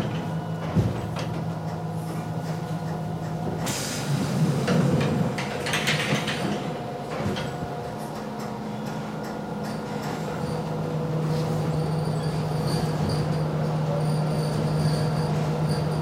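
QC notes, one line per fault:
No faults found on this pass; nothing to log.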